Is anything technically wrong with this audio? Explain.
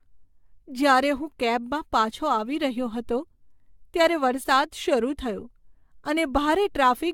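Yes, there's generation loss running the whole way through this speech. It sounds swirly, smeared and hollow, with blurred attacks and nothing above 17 kHz, most likely from around seven rounds of AAC re-encoding at something like 96 kbit/s, each pass piling up fresh quantisation noise.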